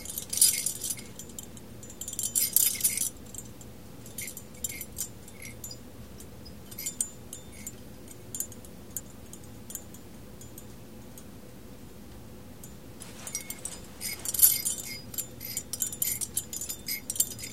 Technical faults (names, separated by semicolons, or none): chunks out of order